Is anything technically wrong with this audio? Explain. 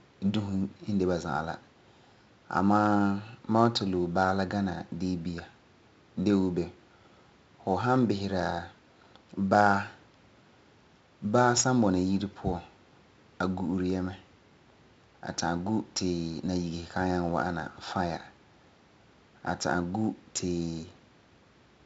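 Yes, there's one problem, and it runs the whole length of the speech: 4-bit ADPCM compression. Each sample is stored as a coarse 4-bit step from a running prediction, and the step size can't keep up, so the damage here is heavy. You get a gritty hiss riding on every loud passage and rough distortion on sharp onsets. Nothing comes through above about 7.7 kHz, which fits a 16 kHz rate at roughly 64 kbps and leaves it sounding dull.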